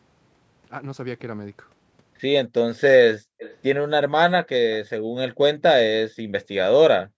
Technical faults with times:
3.20-3.36 speech suppressed in double talk
3.39-3.56 echo leak
6.15-6.27 background gated by the echo canceller
7.09-7.17 background gated by the echo canceller

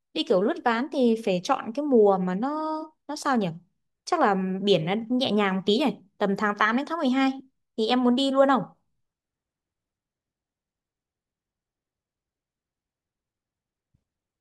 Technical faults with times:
none

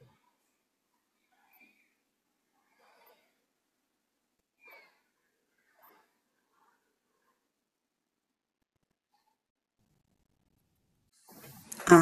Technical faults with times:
none

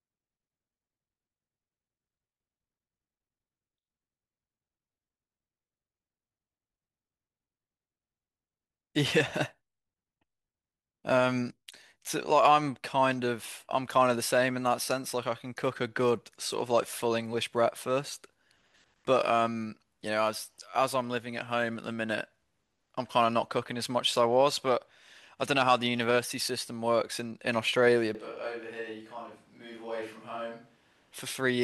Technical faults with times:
28.15-31.12 switch to a distant microphone

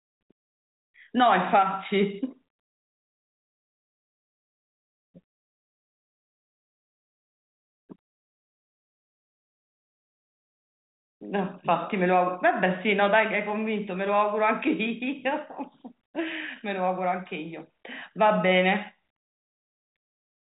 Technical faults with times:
none

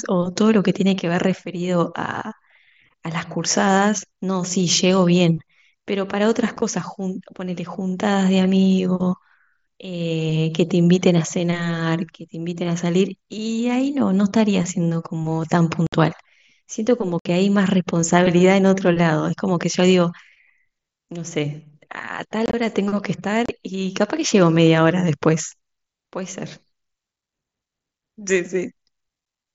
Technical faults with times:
6.56-6.62 unconcealed Bluetooth headset packet loss
15.87-15.93 unconcealed Bluetooth headset packet loss
17.19-17.25 unconcealed Bluetooth headset packet loss
22.46-22.54 unconcealed Bluetooth headset packet loss
23.46-23.49 unconcealed Bluetooth headset packet loss

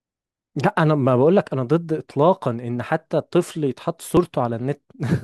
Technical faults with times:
4.17 dropped buffer (overrun)

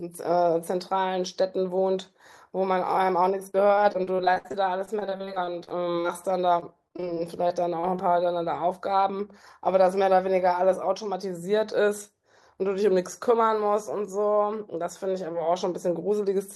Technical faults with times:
3.67-6.06 repeated packet loss (robotic sound)
6.60-8.00 repeated packet loss (robotic sound)

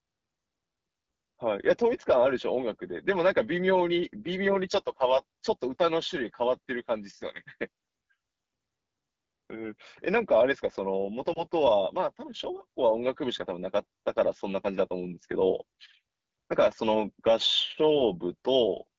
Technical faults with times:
0.00-18.99 AMR wideband (HD Voice) codec
11.33-11.43 lost AMR speech frames

